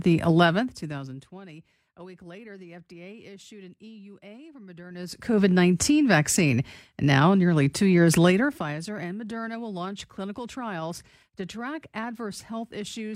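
Zipper noise at 0.38–1.45 s, 4.86–5.38 s and 8.28–8.75 s (after "nearly two years"): the gain falls, rises, then falls in unsmoothed 1–2 dB steps about twenty times a second, causing audible ticking.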